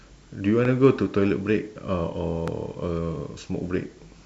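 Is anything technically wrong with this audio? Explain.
Yes. A loud pop occurs at 0.65–0.68 s and again at 2.48–2.50 s, most likely a voltage spike from a switch, plug or static discharge added to the signal. Each is a single sharp click about 10 dB above the speech, which continues underneath.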